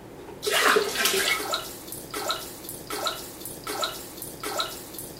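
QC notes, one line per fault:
2.14–5.20 s, broken-record loop: a 0.77 s fragment repeats exactly four times, back to back, through to the end, likely from a stalled player or stream resending its last buffer. Unlike echo, each repeat is identical with no decay, and the audio that followed is lost.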